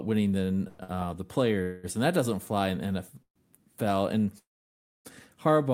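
Just after "winning than", from 0.67 to 0.81 s, the last sound is held as a fading buzz for about 117 ms before the speech resumes where it left off. This is a call audio freeze, likely from packets held up in transit that left the jitter buffer empty. Close behind it, from 0.83 to 0.90 s, a sound is stretched about 54 ms too long with a slight buzz or dip. That is a short stall from a late packet: the receiver extended the last sound until the packet came, and nothing is lost. The freeze returns three more times. From 1.62 to 1.99 s there is about 209 ms of drawn-out buzz. After "that doesn't fly in", from 3.22 to 3.38 s, the held sound fades into about 80 ms of silence. From 4.38 to 5.07 s, the longest gap dies away into roughly 590 ms of silence. Each time, the speech picks up again with nothing missing, only delayed.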